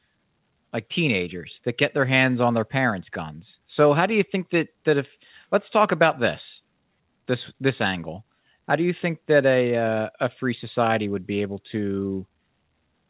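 Listening to the speech, nothing stood out as a fault; the audio carries nothing above 4 kHz, consistent with a call path through a narrowband telephone codec such as G.711 A-law at 64 kbps.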